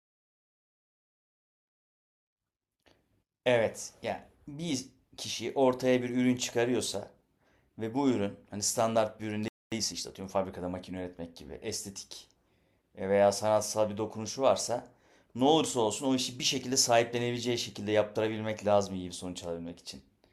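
At 9.48 s the speech cuts out for about 0.24 s, a flat silent gap on the waveform, most likely a playback stall from a starved or blocked player. From 9.72 to 11.28 s, time-compressed catch-up runs the speech about 1.15 times faster at normal pitch, with compressed syllable spacing visible.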